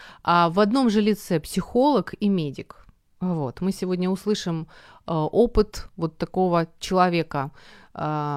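Nothing in this speech recording stood out as a technical fault on listening.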